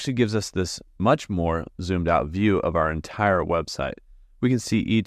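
Nothing in the recording points to a technical fault at any moment. The sound runs without any break, glitch or sudden change worth marking.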